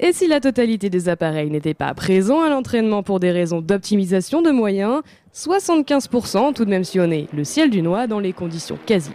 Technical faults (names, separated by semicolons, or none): hard clipping